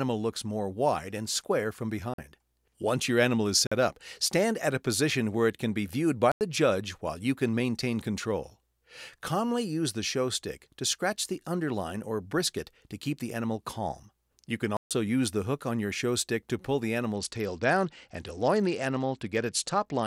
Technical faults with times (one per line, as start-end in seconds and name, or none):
2.14-2.18 block of digital silence
3.67-3.72 block of digital silence
6.32-6.41 block of digital silence
14.77-14.91 block of digital silence
17.14-20.06 Bluetooth SBC bit pool drop